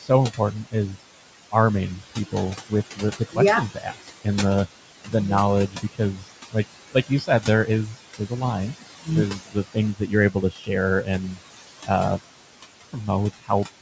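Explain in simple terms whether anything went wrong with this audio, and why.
Noise suppressor artifacts run through the whole clip. The call's noise filter pushes down the room's background noise frame by frame, so it sinks in the pauses and comes back under the talking.

Speech cut by the noise suppressor is the second problem. The same filter mistakes bits of the voice for noise and turns them down too, so soft sounds and word endings get swallowed. It happens from 0.01 to 1.53 s, 2.31 to 4.26 s, briefly around 5.04 to 5.14 s, across a long stretch from 5.69 to 11.89 s (the worst, well over a second lost in total), and again from 12.93 s to the end.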